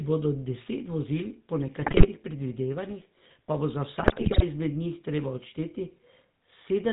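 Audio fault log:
Throughout, GSM full-rate codec: The speech has a buzzy, gravelly roughness and nothing above 4 kHz, so it sounds dull and boxy. The plainly audible damage fits the 13 kbps full-rate codec. It models the vocal tract as a filter and excites it with sparse, regularly spaced pulses that keep only a third of the excitation samples, so the natural fine detail of the voice is replaced by a coarse, grainy buzz.
1.82 to 2.07 s and 4.0 to 4.43 s, GSM bit errors: The first burst comes right after "deset vozil po" and ends just before "predvidevanjih pa bo". The second burst near 4 s is longer. In both, the speech breaks into squawks, pops and gargling. Corrupted filter, pitch and gain values reach the decoder, so each damaged frame gets a bent spectrum or a sudden jump in level. The sound points to a few percent of bits flipped on a weak radio link.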